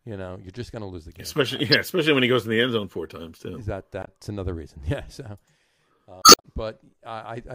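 At 1.72–1.74 s, 4.01–4.08 s and 6.21–6.45 s, damaged data in the compressed stream makes the decoder lose sync and search for the next frame header.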